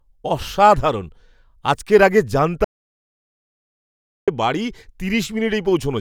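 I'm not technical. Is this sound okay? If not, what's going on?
No. At 2.65 seconds the speech cuts out completely and comes back at 4.28 seconds, about 1.6 seconds of total silence with no background hiss at all. This is an audio dropout to silence, likely from the input briefly disconnecting or muting while recording continued.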